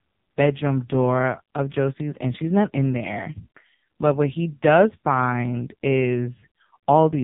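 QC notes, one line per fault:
Throughout, AMR narrowband mobile codec: the speech stops dead at 4 kHz and sounds heavily buzzy and synthetic. The codec resynthesises the voice from a vocal-tract model excited by sparse pulses, and damage this heavy fits a low mode near 5.9 kbps.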